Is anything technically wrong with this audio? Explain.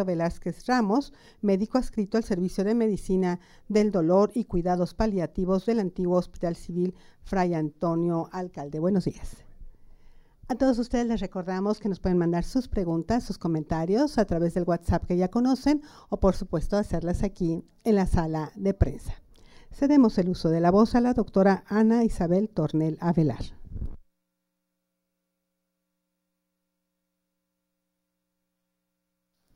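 No, nothing is technically wrong with this audio.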